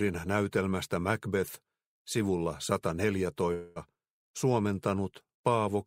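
From 3.53 to 3.78 s the audio stops progressing and the last sound is stretched into a fading buzzy hiss for about 0.22 s, then resumes with roughly that much material skipped, most likely a long network dropout. On a spectrogram this appears as smeared, frequency-frozen bands, with no silent gap in the waveform.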